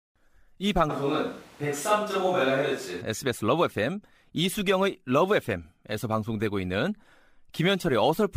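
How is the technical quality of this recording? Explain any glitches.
The recording has one clear glitch: a sudden change in microphone character early in the clip.

From 0.91 to 3.00 s the speech turns roomy and hollow, with thinner bass and more background noise, then snaps back. The likely cause is a switch to a distant microphone, such as a camera's, when the close microphone dropped out. Unlike added reverb or an EQ change, the hard cuts in and out and the extra room noise, roughly 25 dB below the speech, point to a different pickup, while the level stays about the same.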